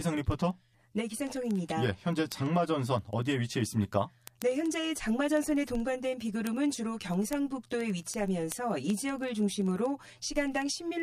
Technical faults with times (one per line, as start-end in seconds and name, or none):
0.00-11.03 channel delay (comb filtering)
0.12-11.00 word clock ticks